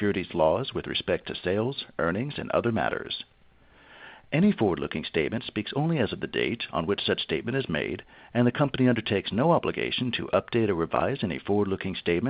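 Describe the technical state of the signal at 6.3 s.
Nothing at 6.3 s departs from an intact signal: no dropout, click, distortion or other fault can be heard at that moment.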